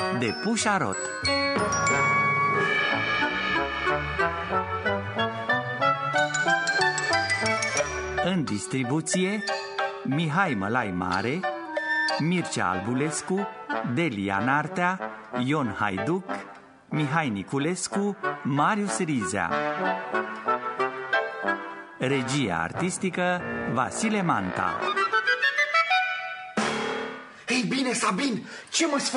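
Nothing here trips any alarms, since there isn't a single dropout, glitch or distortion to point at anywhere in the recording.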